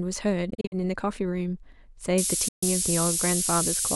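Between 0.50 and 0.74 s the speech breaks into several short silences, totalling about 120 ms and the longest near 46 ms, which points to a run of packets lost on the way to the headphones, a likely Bluetooth dropout. The speech resumes as though it had kept playing. On a waveform these show as flat gaps; a spectrogram shows empty vertical bands.

From 2.18 s to the end, the signal falls to low bit depth with noise shaping, at 4 bits. The rounding error is pushed toward high frequencies, producing a steady, thin hiss that brightens sharply at the top and sits roughly as loud as the speech. A spectrogram shows a noise floor that climbs steeply with frequency. The waveform looks coarse and grainy.

Inside that stretch, a second likely Bluetooth dropout at 2.48 to 2.63 s leaves about 137 ms of silence.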